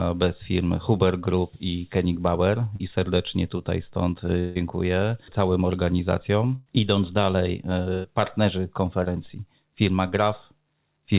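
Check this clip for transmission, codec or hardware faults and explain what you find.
Yes, the clip has several packet-loss faults, heard over audio that stops at 4 kHz, which fits a narrowband telephone codec such as G.711.

Short concealed packet loss at 2.76 s, just before "serdecznie tutaj stąd", and at 9.04 s: about 40 ms and 20 ms never arrived. The receiver extended the preceding sound to bridge the gaps, leaving a brief smear.

Long network dropout from 4.39 to 4.57 s, just after "serdecznie tutaj stąd": about 160 ms is replaced by a continued, fading buzz with no silence. The likely cause is audio missing from the network. Speech resumes without the lost stretch.

Burst of packet loss from 6.55 to 6.68 s, after "całym organizacjom", and from 7.94 to 8.06 s: about 100 ms each went missing. The last sound is held as a decaying buzz or hiss, then speech resumes with that part gone.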